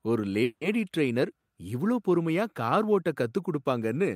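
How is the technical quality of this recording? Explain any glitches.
There's one real glitch here, a call audio freeze from about 0.43 to 0.75 s. The sound stalls into a fading buzz for roughly 180 ms, then carries on where it stopped, nothing lost, just pushed about 180 ms later. That's likely packets stalling in transit and the jitter buffer running dry.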